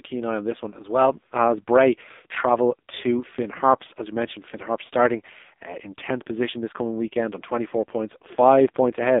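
From start to finish the speech passes through an AMR narrowband mobile codec. Nothing below about 250 Hz or above 3.7 kHz survives. The damage is heavy: each 20 ms frame is rebuilt from a vocal-tract model fed by a few pulses, so voicing turns buzzy and synthetic, which fits a low mode near 5.9 kbps. A plain telephone band filter would sound muffled but natural. The artificial, pulse-driven texture is what marks this as codec damage.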